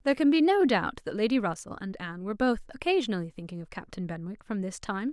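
At 1.54 seconds the speech drops abruptly in level. This is a sudden gain jump of about 6 dB downward. The change lands between one sample and the next, with no fade. The background noise falls by the same amount at the same instant. That points to a digital gain setting applied without a ramp, likely a level adjustment or bit shift. At 1.71 seconds the level snaps back just as abruptly.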